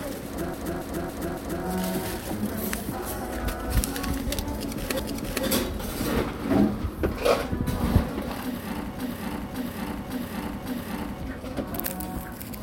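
Repeated frames occur three times. From 0.54 to 1.65 s, a block of about 0.28 s plays four extra times, which fits a run of three frames. From 4.99 to 5.46 s, a 0.46 s block repeats once. From 8.99 to 11.22 s, a 0.56 s block plays four extra times. In each case, compressed frames were written or sent again, so the decoder replays the same stretch. The result is a looping stutter, and the audio runs longer than it should.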